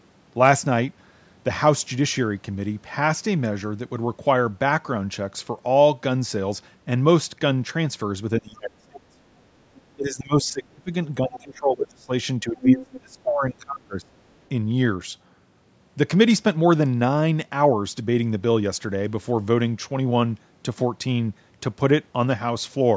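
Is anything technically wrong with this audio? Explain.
Yes. The speech has two related call-processing faults, both in the middle of the clip.

Speech suppressed in double talk occurs at 8.39 to 9.18 s, 9.95 to 10.92 s, 11.24 to 12.12 s and 12.43 to 14.12 s. The talker's level drops by roughly 25 to 30 dB, deepest in the first two stretches. The likely cause is both sides talking at once. The echo canceller then could not tell the local voice from loudspeaker echo, so it pulled everything down.

The other side's voice leaking through is heard at 9.74 to 9.81 s, 12.6 to 12.98 s and 14.32 to 14.47 s. The first and last scraps are faint, about 30 and 40 dB below the speech. The middle one is strong, about 5 dB above it. The likely cause is that the canceller did not fully remove the far-end voice played on the loudspeaker from the microphone signal.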